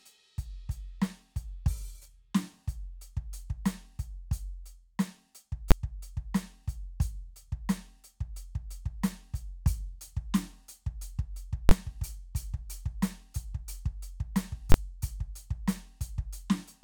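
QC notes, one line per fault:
5.71 s: invalid numbers at full scale. A single loud bang in the music. A calculation produced invalid values, which were pinned to the maximum sample value for one block of about 11 ms, consistent with a 512-sample processing block.
11.69–11.71 s: invalid numbers at full scale. The same fault over about 21 ms, which points to a 1024-sample block. Heard as a pop at each edge with the music cut out between them.
14.72–14.74 s: invalid numbers at full scale. A repeat of the 21 ms full-scale block, with the same pop–silence–pop sound.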